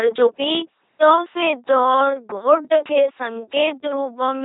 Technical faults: LPC-10 vocoder; time-stretched section

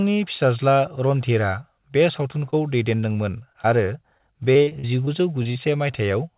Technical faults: short concealed packet loss; repeated packet loss (robotic sound)

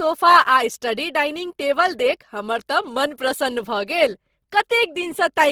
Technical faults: Opus compression

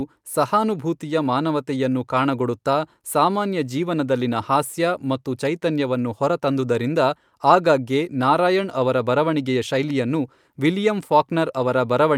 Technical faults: none

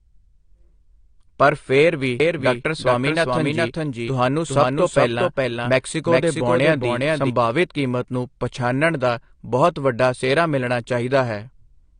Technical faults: AAC compression; doubled audio track

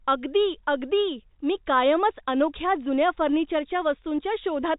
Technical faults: none

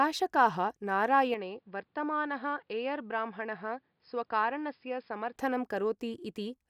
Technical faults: input switched to a poorer device

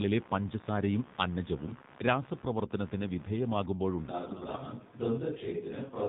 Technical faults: computer activity noise; AMR narrowband mobile codec; AMR bit errors; switch to a distant microphone

